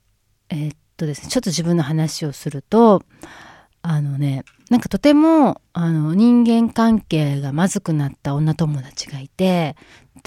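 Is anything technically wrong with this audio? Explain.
No, the signal has no audible technical faults: level, timing and frequency content hold steady throughout, with nothing interrupting or distorting the recording.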